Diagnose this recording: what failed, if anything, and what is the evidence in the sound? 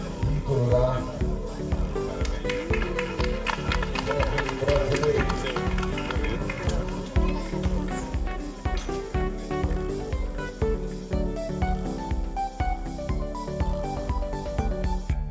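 Nothing in the signal chain appears to have failed: across the whole clip the level holds steady, with no dropouts, clicks, distortion or timing disruptions to be heard at any stage from capture to playback.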